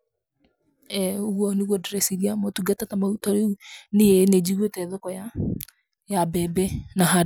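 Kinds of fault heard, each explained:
No technical faults can be heard anywhere in this speech recording. There is nothing to list under any kind of fault.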